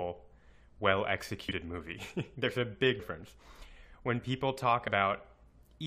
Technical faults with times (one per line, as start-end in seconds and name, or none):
1.45-1.52 compressed frames skipped
2.98 compressed frames skipped
4.87 compressed frames skipped